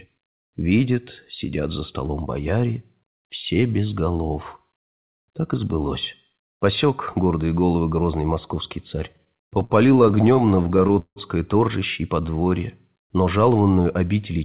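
A speech recording carried over a narrowband call link, with nothing above 4 kHz, which fits G.711 mu-law. From 9.12 to 11.18 s, right after "головы грозный московский царь", repeated stalls (stutter) break the flow into many short freezes of held sound, the longest about 165 ms. This happens because the jitter buffer kept running dry. Unlike a slow-down, these are audible hitches, yet nothing is lost. From 12.20 to 12.50 s, just after "торжище и", a jitter buffer slow-down smoothly stretches the sound to 79% speed at unchanged pitch, adding 71 ms as repeated pitch periods rebuild the buffer's reserve, with no breaks.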